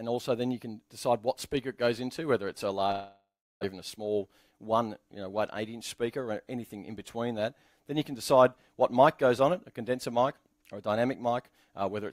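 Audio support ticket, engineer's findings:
Long network dropout, 2.91–3.65 s: last sound stretched into a fading buzz, then 320 ms of near-silence; 600 ms never played. Likely packet loss. Spectrogram shows a smeared tail, then a blank gap.

Jitter buffer speed-up, 3.72–4.75 s: audio hurried to 108% speed, same pitch; receiver cut repeated pitch periods, about a tenth of a second in total. Waveform shows compressed timing with unchanged harmonic spacing.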